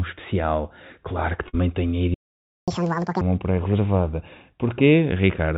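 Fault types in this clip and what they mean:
Burst of packet loss: Lost packets cause a short gap from 1.48 to 1.55 s. The last sound is stretched and fades across it. Then 60 ms of speech is skipped.
Playback stall: The speech stops dead at 2.14 s. Silence lasts 532 ms, until 2.68 s. The player likely ran out of data or was blocked.
Catch-up at higher speed: From 2.68 to 3.21 s the backlog plays at double speed. Pitch jumps nearly an octave, then drops back to normal.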